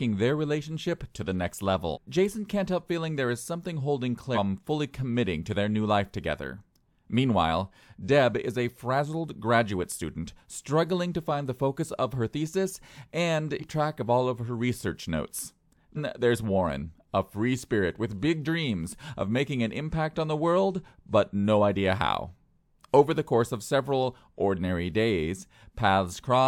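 Whole compressed frames were dropped, either missing from the file or rejected by the decoder as damaged, so compressed frames are skipped and the speech jumps ahead. At 1.93 s and at 4.34 s, between "there is something holding" and "fully committing to their", roughly 0.7 s vanishes. Shorter jumps of about 0.2 s come at 13.59 s, before "track of all of", and at 15.95 s, after "of her research notes". The frame length is about 46 ms.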